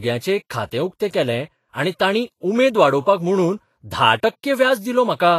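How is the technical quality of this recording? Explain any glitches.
The recording has plainly audible lossy coding damage throughout. The fault is most likely Vorbis compression. Nothing is present above about 14.2 kHz. The treble sounds hissy and grainy, and speech attacks are blurred. Coarse quantisation of high-frequency detail turns it into noise-like grit. The extent of the damage fits a low bitrate, around 32 kbps.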